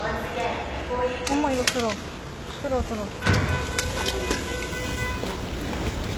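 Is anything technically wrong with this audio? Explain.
Yes, there are two problems. HE-AAC compression, likely the cause of what is heard throughout: the treble is synthesised from copied lower bands under a coarse envelope, so high detail sounds gritty and metallic. Nothing is present above 12.3 kHz, and the plainly audible damage fits a very low bitrate, around 16 kbps.

Sample clock jitter runs from 4.71 s to the end at 6.17 s. The converter's timing wanders by several microseconds, so samples land early or late, and the error grows on steep waveform slopes. This adds a rough hiss, about 25 dB below the sound, strongest on loud, bright passages.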